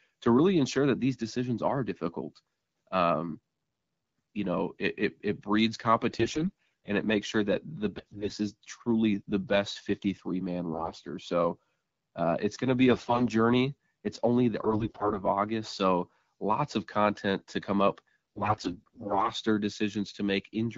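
AMR bit errors hit the speech six times: 6.12 to 6.88 s, just after "it it it breeds"; 7.97 to 8.35 s; 10.73 to 11.02 s, before "so uh it's going"; 12.91 to 13.23 s, before "journey it's only the"; 14.63 to 15.20 s; and 18.36 to 19.30 s. Weakly protected bits in each frame arrived flipped, so pulse positions, gains and spectral values decoded wrong. Pitch and level hold, but the sound turns hoarse and gargly, worst in the final burst. Around these bursts, the wideband codec sounds clear, which points to about 12.65 kbit/s AMR-WB.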